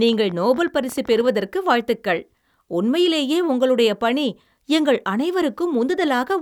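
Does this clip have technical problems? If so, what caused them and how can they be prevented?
Yes: a train of clicks runs from 0.09 to 1.26 s, around twenty irregular pulses at 14.6 per second, peaking about as loud as the speech, ending before "வாழ்த்துக்கள் உண்மையிலேயே உங்களுடைய பணி". On a spectrogram they show as thin vertical broadband lines; on the waveform, sharp spikes. Likely cause is interference or a faulty connection or power supply. Shielding cables, separating equipment and using a stable interface prevents this.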